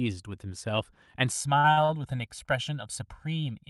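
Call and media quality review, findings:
Channel delay (comb filtering), 1.32 s to end: audio turns hollow and phasey. One channel runs around 1.5 ms late before mono summing, cutting evenly spaced notches from roughly 400 Hz upward.

Short concealed packet loss, 1.59–1.67 s: brief smear. About 40 ms never reached the decoder; concealment extended the preceding sound for 41 ms, then blended back.

Short stalls from late packets, 1.72–1.80 s and 1.85–1.92 s: sound held too long with a slight buzz. Jitter buffer ran empty; the receiver stretched the last sound 52 ms and 39 ms, with nothing lost. The top end stops near 12 kHz, as expected for this Opus call path.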